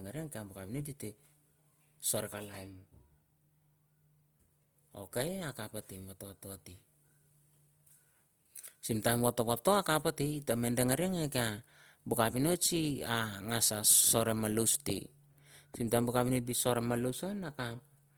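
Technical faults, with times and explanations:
Throughout, Opus compression: the speech sounds rough and grainy rather than swirly, with a noisy texture sitting on the voice's harmonics. That fits the likely cause, Opus running in its music-oriented CELT mode at a low rate, around 24 kbps, which points to a tight bit budget. The band energies survive, but the fine detail inside them gets filled with folded copies or noise, so there's no muffling, and content still reaches up to about 20.2 kHz.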